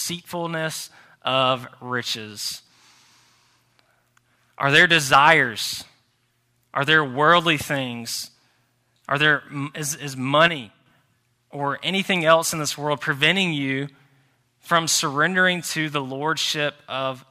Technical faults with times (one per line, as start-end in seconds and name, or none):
10.48-10.86 sudden gain jump